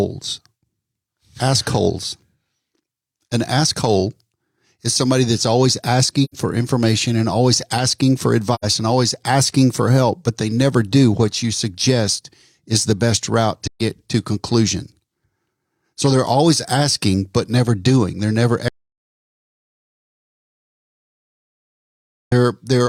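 Soft-edged holes open in the speech at 6.24–6.35 s, after "is somebody that's always", at 8.54–8.65 s, after "and always asking for", and at 13.67–13.80 s, after "is the best route". They last about 85, 85 and 128 ms and fade out and back in. This is AAC frame loss with muting. The lengths fit two, two and three lost frames whose spectrum the decoder zeroed, and the overlapping windows smear each edge.

From 18.68 to 22.32 s the sound cuts to silence for about 3.6 s, with no room tone at all, and then returns. This is an audio dropout to silence, likely caused by the input being lost while the recorder kept writing zeros.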